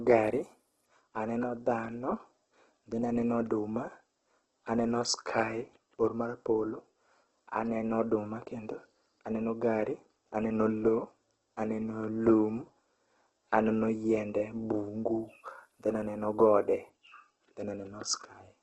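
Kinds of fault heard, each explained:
Opus compression: The speech sounds grainy, rough and noisy throughout, with nothing above 12 kHz. Missing band detail seems filled with noise rather than left as holes. This heavy damage likely comes from Opus in its music mode at a low bitrate, near 12 kbps.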